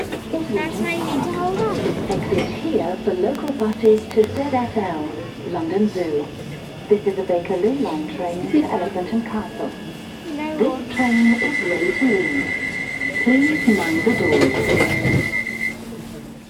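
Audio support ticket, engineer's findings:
Train of clicks, 3.35 to 4.38 s. Regular ticking at about 7.9 per second, roughly ten clicks, near-identical shape, about 15 dB above the sound. Likely interference from nearby equipment or a faulty connection or power supply injecting repeated pulses.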